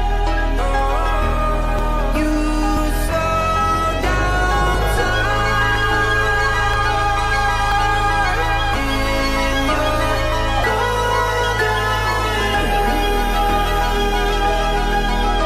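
Overlap between stream segments at 0.79–0.81, 1.79, 2.77, 3.75, 4.74, 5.75, 6.74 and 7.72 s: overlapping segment timestamps make the player cut real sound, giving tiny skips locked to a 1 s grid, unlike random dropout clicks.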